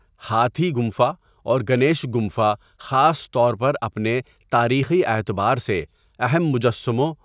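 Nothing in the recorded speech signal points to a technical fault at any point, and no dropouts, level jumps or timing disturbances break its continuity.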